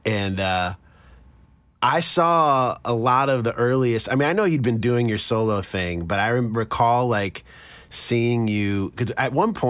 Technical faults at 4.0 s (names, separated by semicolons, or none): none